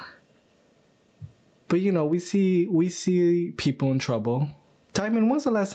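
Gain pumping runs through the whole speech clip. The gain swings by around 20 dB. This is likely from the microphone gain being set far too high, with a fast limiter clamping it down. Unlike a noise gate, pumping rides the level up and down rather than cutting the sound off. The loud and soft passages sound squashed together. Above 8 kHz there is nothing, as expected from the call path.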